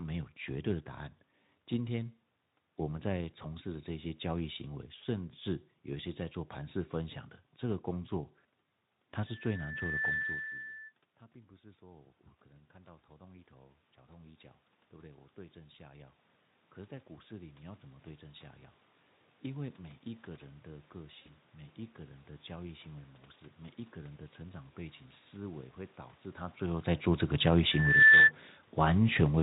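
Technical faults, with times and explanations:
9.27–10.95 s and 27.71–28.32 s, loudspeaker feedback squeal: a single tone at 1.8 kHz swells out of the speech each time, taking under a second to build in the first event and about half a second in the second. The microphone is picking up the loudspeaker it feeds, and at 1.8 kHz the loop gain passes one, so that frequency keeps reinforcing itself. The first squeal sits a few dB above the speech and the second is roughly 10 dB above it.
11.31–22.28 s, automatic gain rising: after the talker moves back from the microphone around 10 s, the incoming level is about 21 dB lower. The automatic gain control treats this as too quiet an input and raises its gain step by step, by about 14 dB in total over roughly eleven seconds. Voice and room noise swell together as it does, and the gain never fully makes up the loss.
21.21–21.31 s, VoIP packet loss concealed by the speech codec: about 40 ms of audio goes missing, which fits two lost 20 ms frames. 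The Speex decoder fills the gap by extending its last pitch and spectral shape at falling gain, so the sound is briefly stretched and fades. Because each frame builds on the one before, the speech stays weak or distorted for tens of milliseconds after the packets return.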